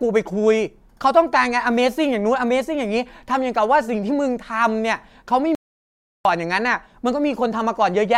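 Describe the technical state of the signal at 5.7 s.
At 5.7 s you're inside an audio dropout to silence, 5.55 to 6.25 s: dead silence, no room tone, likely the input cutting out while recording continued.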